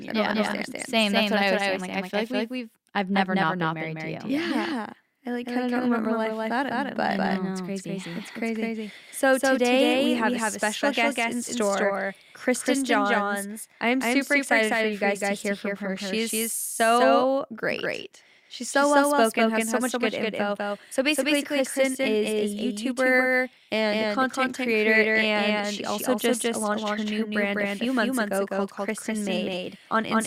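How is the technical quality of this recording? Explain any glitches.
The recording has one clear problem: a doubled audio track that runs the whole way through. Every bit of the speech comes back a second time, around a fifth of a second later and about as loud as the original, so everything sounds stuttered and smeared. The echo is a clean, full-band copy with no decay or room tone, which likely means the same signal reached the mix twice, once through a slower path.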